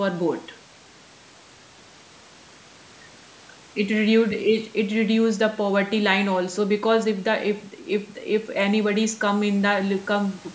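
No technical faults can be heard in this speech.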